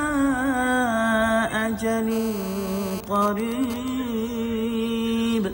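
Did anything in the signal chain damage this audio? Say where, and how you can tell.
Yes. GSM phone buzz enters at the analogue wiring from 2.12 to 3.01 s: a hard, raspy 217 Hz buzz, full of harmonics, about 14 dB below the signal. A phone in an active call transmits steadily, and the audio circuit rectifies those radio pulses.

From 3.04 to 3.88 s the steady buzz gives way to GSM signalling bursts, again in the analogue wiring: even ticks with a longer 217 Hz buzz twice a second, roughly 10 dB below the signal. The phone's talker has gone silent, so it sends only intermittent burst groups, which the circuit rectifies.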